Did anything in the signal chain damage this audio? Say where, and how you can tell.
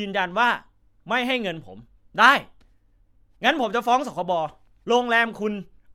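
No, nothing in the signal chain damaged this audio.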